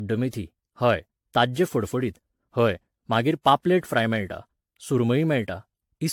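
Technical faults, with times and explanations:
throughout: generation loss. The speech sounds swirly, smeared and hollow, with blurred consonant attacks and nothing above 19.2 kHz, worse than one AAC pass near 96 kbit/s would leave. It was likely re-encoded around ten times, each pass adding fresh quantisation noise on a shifted frame grid.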